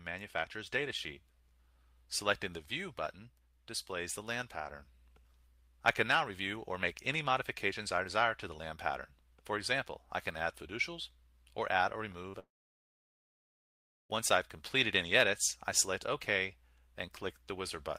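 At 12.29 s, lasting until about 12.35 s, the sound briefly smears and wobbles. This is short concealed packet loss: about 40 ms of the stream did not reach the decoder in time, so the receiver filled the gap by extending the preceding sound for roughly 41 ms and then blending back into the real signal.

Immediately after, from 12.39 s to 14.11 s, the audio trails off into a fading continuation of the last sound, then goes quiet for about 1.6 s before the signal returns, with the missing stretch simply skipped rather than delayed. This is most likely a long network dropout. Around 1.7 s of audio never arrived, and the concealment carried the final sound forward only briefly before leaving silence until packets resumed.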